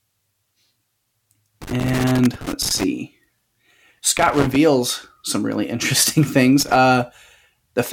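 Irregular bursts of crackle and scratching break through the speech from 1.62 to 2.84 s, again from 4.18 to 4.56 s, and briefly from 6.60 to 6.76 s. This is loose connector crackle: a worn or dirty contact rapidly making and breaking, chopping the signal.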